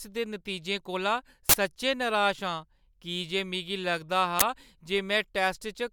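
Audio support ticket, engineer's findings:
Uninitialised buffer: loud digital noise bursts, 1.49–1.54 s before "सच्चैं नराश" and 4.40–4.42 s, fitting 2048- and 1024-sample blocks. Playback read stale memory before audio was written.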